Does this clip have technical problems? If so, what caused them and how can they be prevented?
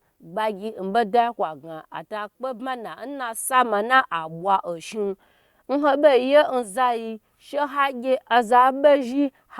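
No, the speech signal shows no audible technical faults, with steady level and continuous playback throughout, so there is nothing here that needs preventing.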